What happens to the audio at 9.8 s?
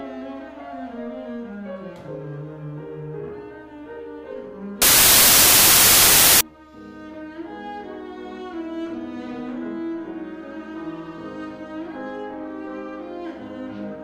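Nothing goes wrong at 9.8 s; the audio there plays through intact, with no dropout, glitch or other fault.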